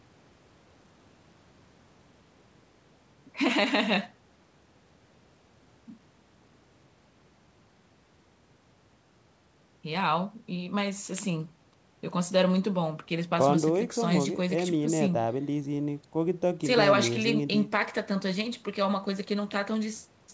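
No faults found; the speech carries ordinary call-path coloration, with the microphone processing and a wideband codec, consistent with G.722, leaving no content above 8 kHz.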